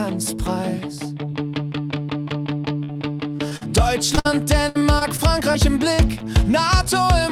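From 2.83 s to 6.22 s, packets were repeatedly lost or delivered too late, producing repeated packet loss (robotic sound). The receiver hit 14 separate holes, the longest 62 ms, and bridged each by extending the last sound it had received. About 0.43 s was patched this way, roughly 13% of the stretch. Because each patch ends just before the next hole arrives, the audio through this span is choppy and broken, with pieces missing.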